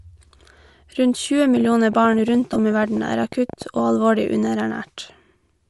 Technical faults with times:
0.00-5.69 Bluetooth LC3 compression
1.57-3.91 train of clicks
2.53-2.56 lost LE Audio frames

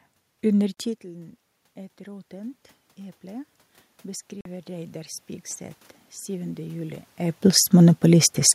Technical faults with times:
0.74-0.77 Bluetooth dropout
1.97-5.22 automatic gain rising
4.41-4.46 Bluetooth dropout
6.25-7.48 automatic gain rising

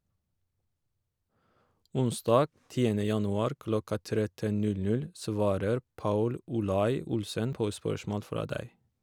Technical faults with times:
6.01 dropped buffer (overrun)
7.53 dropped buffer (overrun)

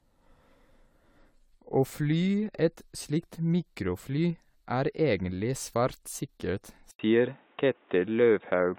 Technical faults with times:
0.00-8.79 generation loss
6.91-8.79 input switched to a poorer device

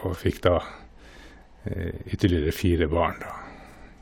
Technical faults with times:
none

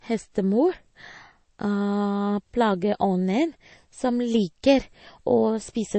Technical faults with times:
0.00-5.98 MP3 compression

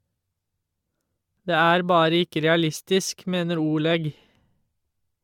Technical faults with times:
0.00-5.24 generation loss

